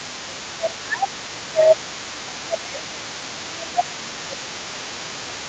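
Speech suppressed in double talk, from 0.0 to 1.85 s and again from 2.24 s to the end: the talker dips by up to about 20 dB and thins out in pieces, likely because the echo canceller, hearing both sides at once, could not tell the talker from the loudspeaker echo and turned everything down.

The other side's voice leaking through runs across the whole clip at about 20 dB below the talker. A second voice sits underneath, likely residual loudspeaker echo that the canceller failed to remove from the microphone signal. Nothing reaches above 8 kHz, consistent with the call's wideband codec setting.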